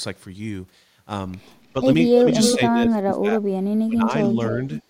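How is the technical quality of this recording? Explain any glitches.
The recording is marred by echo-canceller trouble in its second half: the speech is repeatedly ducked and a delayed copy of it leaks back.

From 2.13 to 2.26 s the speech dips by roughly 10 dB. From 2.55 to 4.12 s it sinks much further, at its deepest by around 35 dB, so the talker nearly vanishes for about a second and a half. This is likely speech suppressed in double talk: with both sides talking at once, the canceller couldn't tell the near talker from loudspeaker echo and turned everything down.

Between 2.33 and 2.56 s a second copy of the speech trails the original by about 0.29 s, roughly as loud as the speech itself. It returns at 4.32 to 4.45 s somewhat quieter, and again at 4.73 to 4.82 s much fainter, each time at about the same 0.29 s delay. That steady lag points to a likely echo leak: the far end's microphone picked up its loudspeaker, and its canceller let part of that sound through and send it back.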